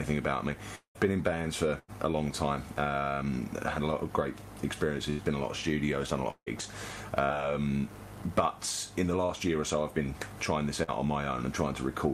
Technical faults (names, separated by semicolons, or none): long network dropout; burst of packet loss; short concealed packet loss